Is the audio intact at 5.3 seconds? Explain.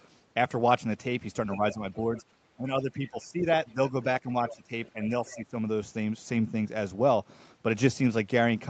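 No. From 4.49 to 5.36 s, the other side's voice is leaking through. The talker's device was likely playing the far end on a loudspeaker, and the echo canceller left part of it in the microphone signal. The result is a faint second voice, roughly 15 dB below the main speech, sitting underneath it right up to 5.3 s.

Just after that, from 5.34 to 5.55 s, speech is suppressed in double talk. With both sides active, the echo canceller likely could not tell the near talker from the echo and turned the whole signal down. The voice dips by roughly 15 dB for about a fifth of a second.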